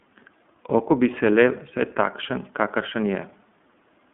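The iLBC codec shapes the whole speech clip from start to finish. The band is held between roughly 150 Hz and 3.5 kHz, so sibilants lose their top and the sound is thin and telephone-like. Because each block of excitation is coded on its own, with no help from the block before, the voice turns audibly rough and faintly synthetic. The graininess fits 30 ms frames and the 13.33 kbps mode.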